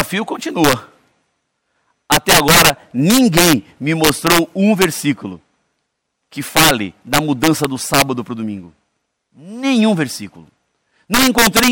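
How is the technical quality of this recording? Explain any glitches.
Technical quality is poor because of one fault present throughout the speech. Integer overflow: the signal was pushed about 6 dB past the integer limit, and peaks that exceeded it wrapped to the opposite sign instead of being held. Roughly one to two percent of samples are affected, heard as harsh cracks on louder syllables. The waveform shows peaks snapping from top to bottom, and the spectrogram shows full-band vertical streaks.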